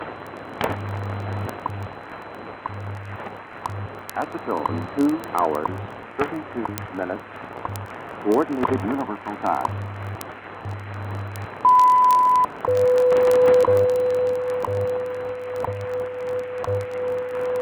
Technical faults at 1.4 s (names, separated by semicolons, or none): word clock ticks